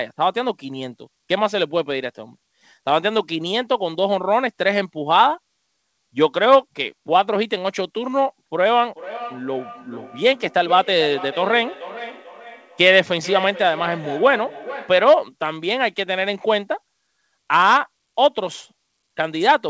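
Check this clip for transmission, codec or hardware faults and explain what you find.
One fault is present: feedback echo between two devices, from 8.95 to 15.11 s. A second device on the call replays this microphone's signal, which is picked up again and sent back, beyond the reach of the echo canceller. The speech returns roughly every 0.4 s, peaking about 15 dB below the direct speech. The audio has nothing above 8 kHz throughout, which fits a wideband call codec such as G.722.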